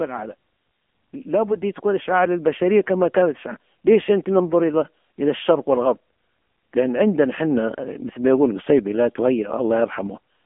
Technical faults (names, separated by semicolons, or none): AMR narrowband mobile codec; automatic gain rising